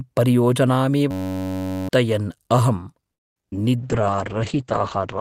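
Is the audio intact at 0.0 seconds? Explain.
Yes, the audio is intact at 0.0 seconds, with no fault present at that moment.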